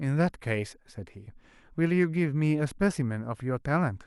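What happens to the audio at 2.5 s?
Nothing goes wrong at 2.5 s: the speech runs on intact through that moment, with no dropout, click or distortion.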